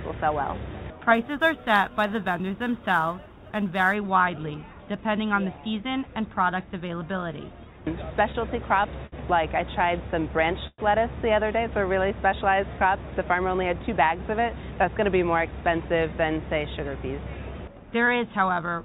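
From 1.14 to 3.95 s there is sample clock jitter. The converter's timing wandered by a few microseconds, so each sample was taken slightly off time, adding an error roughly 35 dB below the signal. It is heard as a fine hiss or roughness that grows on loud, bright passages and disappears in quiet moments. On a spectrogram this appears as a faint noise floor that rises and falls with the signal's energy, strongest under the high-frequency content. In this clip that content ends at 4 kHz, because the call path band-limits the audio in a way that fits G.711 A-law.

At 9.07 to 9.14 s there is a short stall from a late packet. A packet arrived too late for playback, so the receiver held the last sound for 56 ms and then resumed from the same point, without losing any audio. It is heard as a brief hold with a slight buzz. In the waveform a short repeated, periodic stretch appears. On the spectrogram the harmonic lines run flat and unchanging for that interval.

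From 10.67 to 10.80 s there is a call audio freeze. The audio hangs as a buzz that fades out, followed by about 30 ms of silence, 110 ms in total, before the audio resumes where it stopped. The likely cause is packets held up in transit, which drained the jitter buffer. On a spectrogram the last frame smears across the gap and decays to blank before the audio resumes.

From 14.39 to 15.02 s there is a jitter buffer speed-up. To reduce the excess delay, the receiver cut out short pitch-period pieces, about 70 ms in total. The audio plays at about 110% speed at unchanged pitch and sounds hurried. On the waveform, events crowd closer together.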